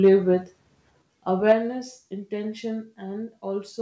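Input gain set too high, likely overdriving the microphone, pushes peaks about 2 dB past the converter's limit from 0.04 to 0.14 s, flattening a few percent of samples and giving the loudest syllables a harsh, crackling edge. At 1.02 s the input volume is likely stepped down by the call software, and the speech and background drop by about 7 dB at once. Microphone overload returns from 1.48 to 1.52 s at about 3 dB over, clipping a larger share of samples. At 1.52 s, right after that distorted peak, the microphone volume likely steps down again, cutting the level by about 5 dB. The sound carries no content above 8 kHz, consistent with a G.722 call path.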